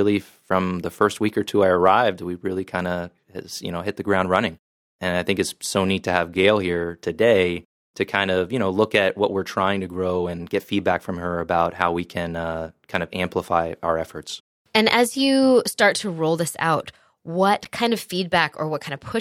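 At 17.65 s, just before "kind of", there is a block of digital silence. For about 10 ms, the speech samples were replaced by zeros. The sound cuts out and returns with no fade. The abrupt edges make it sound like a sharp tick.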